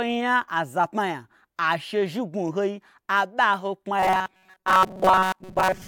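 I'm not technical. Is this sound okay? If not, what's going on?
No. From 3.99 s to the end there's robotic sound from repeated short buffers: a metallic 188 Hz buzz, likely tiny chunks replayed in place of most new audio.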